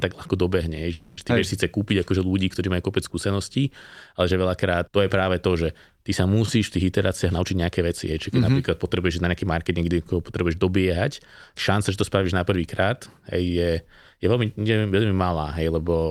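A speech recording with two timing faults. From 0.93 to 1.19 s the sound stalls: the last instant is stretched into a fading buzz for about 240 ms, and then the speech resumes exactly where it stopped, with nothing skipped. This is a call audio freeze, likely from packets held up in transit so the jitter buffer ran dry. The receiver filled the wait with a decaying continuation of the previous sound, which pushed everything after it about 240 ms later. From 7.09 to 9.43 s the speech sounds hurried, running at 110% speed while its pitch stays unchanged. This is a jitter buffer speed-up. Having built up more delay than it aims for, the receiver trimmed many tiny pitch-period-length slices in succession, about a fifth of a second in total, to catch back up.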